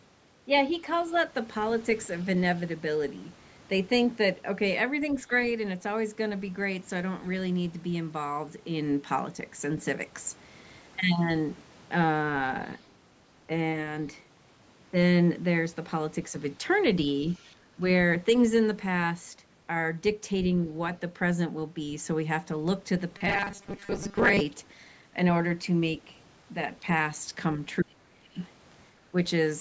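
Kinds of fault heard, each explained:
Other side's voice leaking through: Faint scraps of a second voice sit far below the main talker, near 0.94, 12.62, 17.33 and 28.41 s. They are brief and very quiet. The likely cause is loudspeaker sound reaching the microphone and surviving echo cancellation.
Speech suppressed in double talk: The talker's level briefly dips by about 10 dB near 17.76 s. From 27.82 to 28.38 s it is pushed down much harder, by about 30 dB. This is likely an echo canceller turning down the talker's voice while both sides overlap.
Robotic sound from repeated short buffers: From 23.18 to 24.42 s the sound turns into a rigid metallic buzz at 200 Hz. About half of it is repeated material. Likely, late audio was covered by looping the last 5 ms, which fits that pitch.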